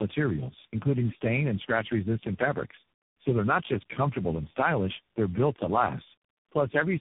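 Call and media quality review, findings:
Rough, muffled, warbly speech throughout, nothing above 3.7 kHz. Tandem speech coding: fits four codecs chained, ending in CVSD, each re-encoding the previous stage's damage.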